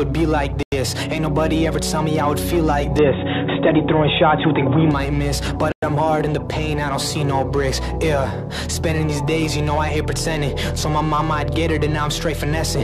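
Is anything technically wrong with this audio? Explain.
Yes. At 0.63 to 0.72 s and again at 5.72 to 5.83 s there is a Bluetooth stall, most likely from interference delaying packets until the headphone buffer emptied. Playback halts into silence for 93 ms and then 106 ms before the sound resumes.

From 2.99 to 4.91 s the input switched to a poorer device, likely another microphone or a headset call profile. Its narrower band leaves nothing above 3.8 kHz, so the sound turns dull and boxy. Level shifts by roughly 5 dB, and a new noise floor sits about 35 dB below, with no gap at the change.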